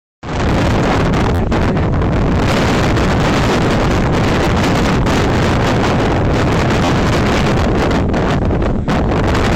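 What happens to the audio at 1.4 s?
There's a repeated buffer there, running from about 1.35 to 1.39 s. Fresh audio didn't reach the output in time, so the device kept replaying the last chunk it had, roughly 11.6 ms long, which fits a 512-sample buffer. That tiny slice loops about four more times with a hard join at each repeat, so it comes across as a short buzz rather than a stutter, and around 50 ms of the real sound is missing.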